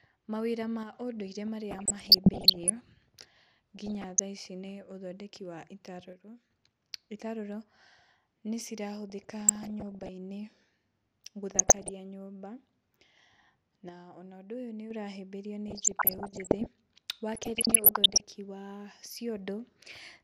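MP2 compression runs through the whole speech clip: the sound is dull and carries a gurgling, granular edge, likely from MPEG Layer II coding at a rate near 80 kbps, where upper sub-bands get too few bits, switch off intermittently, and the remaining bands are coarsely quantised.

One channel drops out at 0.83 to 0.94 s, 6.13 to 6.51 s and 13.89 to 14.91 s. The level suddenly sinks by about 6 dB and then recovers, as if one stereo side had vanished from a mono sum.

DAB burbling appears at 1.71 to 2.70 s, 3.76 to 4.19 s, 9.10 to 10.09 s, 11.50 to 11.90 s, 15.68 to 16.68 s and 17.34 to 18.25 s. Reception errors of up to around one percent slip past correction into the audio data: corrupted samples put short blips of noise in single sub-bands, and corrupted scale factors make sub-bands jump in level for up to a frame. The result is short noise blips and level jumps over the speech.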